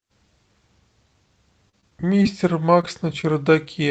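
From 1.69 to 2.27 s, packets kept going missing, five gaps, the longest about 33 ms, so this repeated packet loss leaves patched, choppy sound. At 2.81–2.85 s and 3.21–3.25 s, roughly 20 ms each failed to arrive, and the short concealed packet loss smears the sound briefly.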